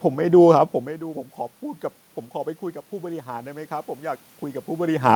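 Automatic gain rising runs from 3.02 s to 5.02 s. The level arriving at the microphone drops by about 17 dB. The gain control reads this as too quiet an input and slowly raises its gain by about 4 dB over those two seconds. The speech therefore swells back gradually, and the room noise swells with it at the same rate. This sits alongside the talker's own movement near the microphone at around 4.5 s.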